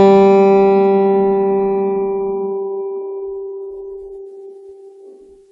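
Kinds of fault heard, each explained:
transcoding between lossy codecs: the music was likely encoded as MP3 then re-encoded as WMA, each sounding near 48 kbit/s, so WMA's artefacts pile onto MP3's dulled top end.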